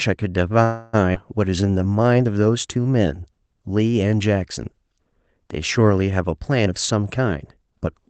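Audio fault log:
0.63–0.95 s, call audio freeze: likely delayed packets emptied the jitter buffer; the last sound is stretched into a fading buzz for 0.3 s, then speech resumes with nothing lost.
1.13 s, skip ahead: audio was dropped while later packets waited; about 150 ms of speech vanishes and playback jumps forward almost seamlessly.
1.45–2.15 s, jitter buffer slow-down: a low buffer was refilled by repeating pitch periods, adding 118 ms; speech plays at 84% speed, drawn out at unchanged pitch.
6.66–7.87 s, jitter buffer speed-up: excess buffered audio was trimmed by cutting short pitch-period pieces, roughly 150 ms in all; speech runs at 110% speed and sounds hurried.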